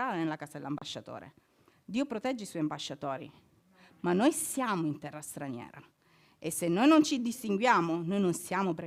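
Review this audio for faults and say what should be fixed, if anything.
A digital broadcast dropout at about 0.78 to 0.82 s cuts the speech to silence for roughly 32 ms, consistent with a single frame lost to signal loss or a failed checksum. The receiver mutes instead of playing corrupt data, and the speech resumes afterwards. Unlike an analogue fade or interference, there is no hiss, noise burst or gradual weakening beforehand, just a clean hole. Stronger error protection or better reception margin at the receiver would prevent it.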